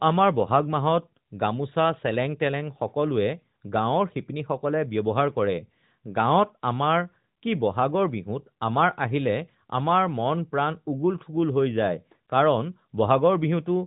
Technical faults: none

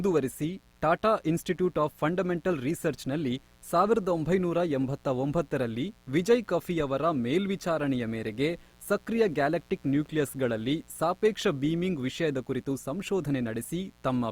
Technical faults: mains buzz

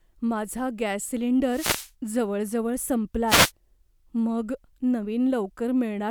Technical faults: wireless microphone noise hit

